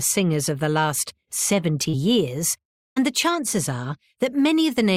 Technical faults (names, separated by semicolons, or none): short concealed packet loss